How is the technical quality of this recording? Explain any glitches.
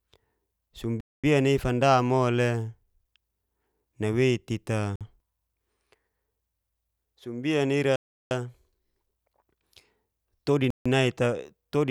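The recording is marred by four dropouts, each the signature of a Bluetooth stall. The speech cuts to silence at 1.01–1.24 s (about 231 ms), 4.96–5.01 s (50 ms), 7.96–8.31 s (351 ms) and 10.70–10.86 s (151 ms), then resumes. The likely cause is radio interference delaying packets until the headphone buffer empties, so playback halts until retransmissions arrive. On a waveform these show as flat-line gaps; a spectrogram shows clean vertical blank bands across all frequencies.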